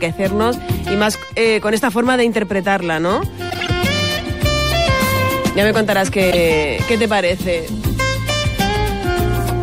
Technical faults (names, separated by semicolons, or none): corrupt frame decoded